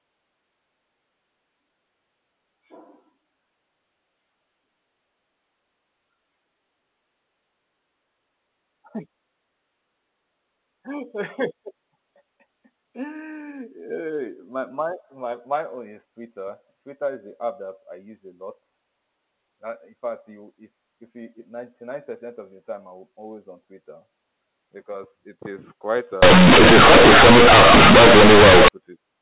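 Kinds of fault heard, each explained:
Companded audio read as linear: after "because it is quite", from 26.23 to 28.68 s, the sound becomes loud, harsh buzz with noise in pauses, because A-law bytes are played as linear 8-bit samples without expansion, so quiet parts swing as wide as loud.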